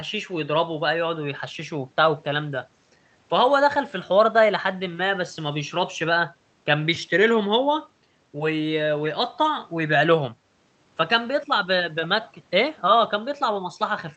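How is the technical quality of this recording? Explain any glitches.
No glitches: the speech comes through an ordinary call path whose codec tops the audio out at about 8 kHz, which is simply how that link carries it.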